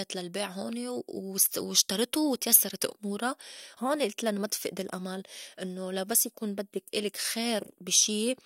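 From start to finish, a resampler restarted on every block. Each 20 ms block was converted alone, so its edges lacked true neighbouring samples. That leaves a small error every block, heard as a 50 Hz buzz under the speech. This fits a 44.1 kHz to 48 kHz conversion.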